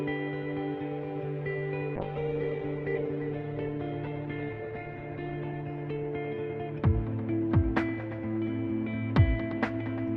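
At 1.97 s a call bitrate drop begins and lasts until about 7.19 s. The call's bandwidth estimate fell, so the encoder was pushed to spend far fewer bits. The sound coarsens and turns rough and watery. The top end also vanishes, with the bandwidth narrowing from 20 kHz to 8 kHz. That muffled sound fits a fall from around 48 kbps to about 10 kbps. The worst stretch holds for about 3.4 s before the bitrate recovers.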